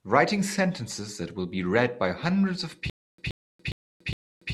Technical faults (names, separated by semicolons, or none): stutter with silent gaps